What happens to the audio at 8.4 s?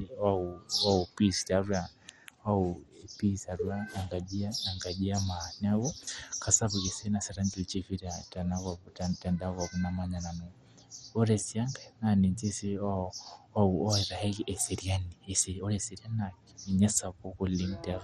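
At 8.4 s the speech carries the same damage heard across the whole clip, most likely from MP2 compression. Layer II divides the signal into 32 sub-bands and rations bits among them; starved, the top bands shut off entirely, leaving nothing above about 13.1 kHz, and the surviving bands are coarsely quantised into a dull, gurgling graininess that fits a bitrate near 56 kbps. Unlike a simple low-pass filter, the remaining bands flicker and churn instead of sounding clean.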